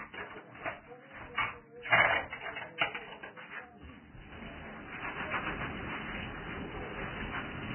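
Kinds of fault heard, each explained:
Vorbis compression: Nothing is present above 3 kHz, and the remaining band is heavily damaged. Treble detail is replaced by grainy, hissy noise of similar energy, tones sound roughened, and attacks are blurred throughout. The likely cause is Vorbis coding at very low quality: the encoder drops the band edge to save bits and quantises what is left so coarsely that fine structure turns to noise. The depth of the damage fits a bitrate of around 10 kbps.
pre-echo: At about 2.78 s, a short hiss of roughly 34 ms, lasting until about 2.81 s, runs ahead of a sharp attack, and the onset itself sounds soft and smeared. A transform codec spreads its quantisation error evenly across each block. Here a sudden loud event sits late in a block, so the noise sized for that loud part also fills the quiet stretch just before it, where nothing masks it.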